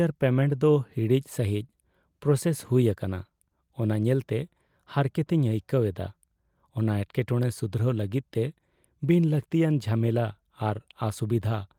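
No technical faults can be heard anywhere in this recording.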